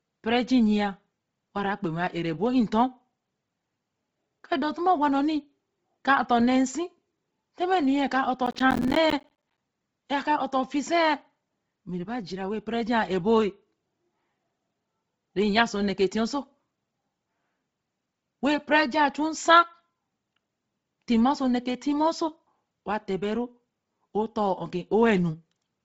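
Throughout the speech, heavy compression from what is likely Bluetooth LC3 coding leaves nothing above 7.7 kHz, and the thin, starved detail points to a low rate of around 24 kbps with short 7.5 ms frames. The encoder discards much of the upper spectrum and patches it with synthetic noise, so consonants and the top of the voice take on a breathy, grainy edge, with a dull ceiling where real brightness should be.

From 8.46 to 9.58 s, processor overload crackle sets in: the system repeatedly fails to deliver its small audio buffers on time, dozens of them, each around 10 ms long. Every missed buffer is replaced by a brief slice of silence with abrupt edges, and the rapid string of these dropouts is heard as a gritty, tearing crackle layered over the voice until the load eases.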